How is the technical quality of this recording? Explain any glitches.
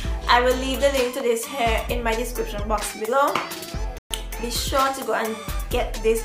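The recording has one clear glitch, a playback stall. From 3.98 to 4.11 s the sound stops abruptly in mid-flow and falls silent for about 125 ms before carrying on. The likely cause is the player briefly running out of data or having its thread blocked, so nothing reached the output until it recovered. Unlike a click or momentary dropout, this is a distinct stretch of true silence long enough to register as an interruption, not a short tick or a filled-in patch.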